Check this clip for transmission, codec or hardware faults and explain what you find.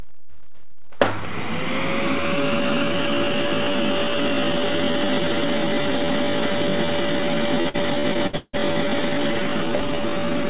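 Three faults stand out: a constant DC offset, a time-stretched section, and a burst of repeated packet loss.

DC offset runs through the whole clip. You can't hear it as a sound, but the waveform sits shifted to one side of zero, with steady energy at the very bottom of the spectrum. A constant bias added somewhere in the capture or conversion chain pushes every sample the same way. That wastes headroom, so peaks on one side reach the clipping point sooner than they should.

From 2.16 s to the end of the clip the pace abruptly slows to roughly 0.64 times the original speed, while the pitch stays where it was. The slowed material drags. This is likely a time-stretch applied to make the audio fill a longer duration. The algorithm holds pitch constant by repeating short fragments of the waveform.

Between 7.62 s and 8.55 s the sound turns choppy, in the way typical of repeated packet loss. 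There are six separate dropouts, the longest about 163 ms, and about 37% of that stretch is concealed. Each time data is missing, the receiver fills the hole by extending the last sound it had, and the next hole arrives before things recover. The result is a run of choppy patches with pieces of the original gone. The call path's G.711 mu-law coding, which leaves nothing above 4 kHz, adds its narrowband character underneath.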